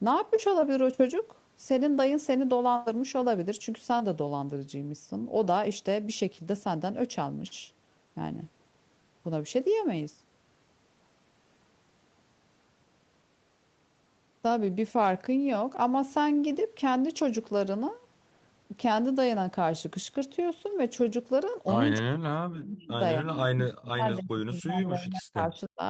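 Echo leak at 21.96 to 22.01 s and again at 22.82 to 22.88 s, in this speech clip: brief, faint copies of the voice return 297 ms late, roughly 20 dB and then 30 dB below the speech. The likely cause is a loudspeaker echo canceller on the far end letting part of its microphone pickup slip back. Speech suppressed in double talk runs from 22.01 to 22.96 s and from 23.21 to 25.82 s. The voice dips by as much as about 40 dB, for roughly one second and then two seconds of audio, while the other side talks. The likely cause is an echo canceller that cannot separate its own talker from the echo and turns both down. Throughout, the sound stops near 8 kHz, as expected from the call's microphone processing and the Opus call path.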